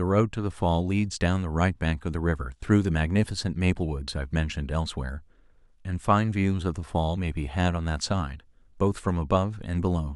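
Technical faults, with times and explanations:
Nothing technical to flag here; the speech comes across without any faults worth noting.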